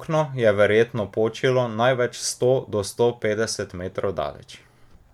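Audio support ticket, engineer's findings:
No audible faults found; signal path behaving as expected.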